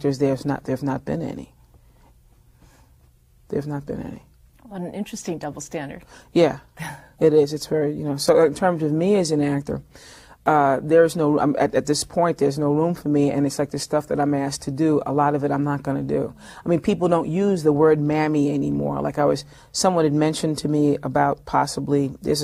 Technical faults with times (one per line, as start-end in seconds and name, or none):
none